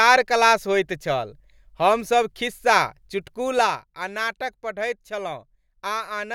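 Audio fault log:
3.50 to 3.84 s, zipper noise: the level falls by around 10 dB in hard 2 dB steps, about ten a second, instead of gliding down. Each step jumps the waveform's amplitude at once, leaving a tiny discontinuity that ticks, so the speech picks up a zipping texture while the level moves. On a waveform the envelope drops as a staircase. A spectrogram shows thin vertical broadband lines at each step.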